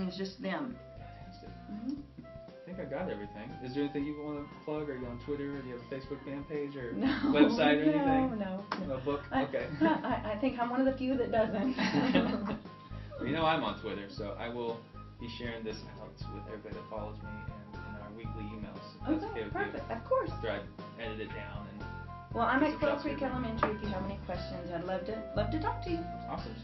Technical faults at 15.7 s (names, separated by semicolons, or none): none